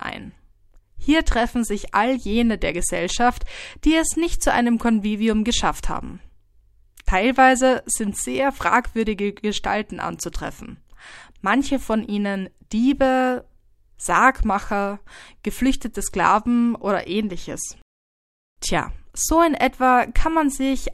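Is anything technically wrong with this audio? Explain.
No, nothing technically wrong turns up anywhere in this speech recording.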